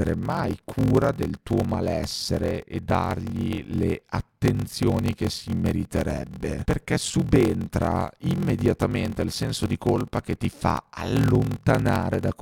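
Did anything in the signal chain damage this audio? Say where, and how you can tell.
Yes: a block size mismatch (padded) at the buffer. Zero-filled gaps throughout cause a 43.1 Hz buzz and 0.861× speed with the timbre kept, and the waveform shows evenly spaced dropouts.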